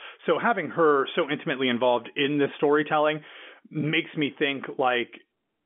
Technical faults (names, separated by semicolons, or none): none